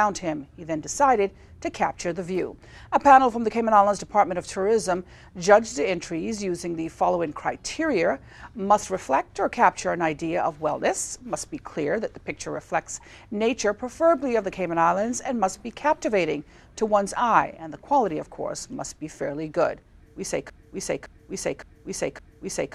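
At 20.50 s the sound locks into a broken-record loop. A 0.56 s fragment repeats exactly, back to back, four times, and runs to the end. The likely cause is a stalled player or stream resending its last buffer. The audio that belonged there is lost.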